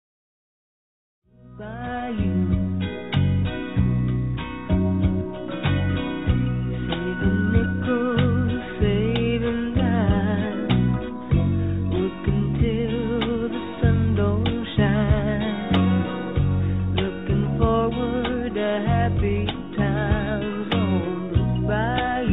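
No faults can be heard.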